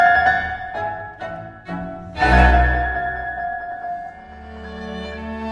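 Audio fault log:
Nothing stood out on listening.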